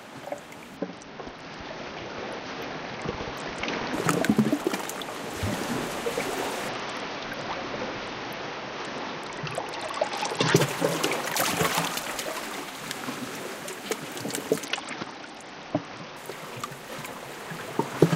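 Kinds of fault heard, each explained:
Bluetooth SBC bit pool drop: Three times, at 0.77–3.93 s, 6.69–10.56 s and 14.64–16.17 s, the link starves the encoder, which fits a bit pool falling from 28 to 8 and about 72 kbps. The upper sub-bands lose their bits, so the treble dulls and the remaining bands turn grainy. On a spectrogram the top of the spectrum goes dark in abrupt blocks and speckled noise fills the lower bands, then full bandwidth returns.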